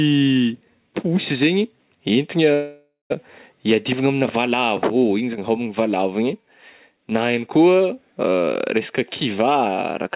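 From 2.54 to 3.14 s the sound smears into a fading buzz, then about 160 ms of near-silence, and resumes with roughly 400 ms missing. This is likely a long network dropout, distinct from a brief packet loss by its length and audible gap. From 3.52 to 5.50 s, just before "valavo igny", a jitter buffer speed-up trims pitch periods, running about 8% faster at unchanged pitch and removing around 150 ms, unlike a pitch-shifting playback-rate error. Throughout, the call path's G.711 coding leaves nothing above 4 kHz.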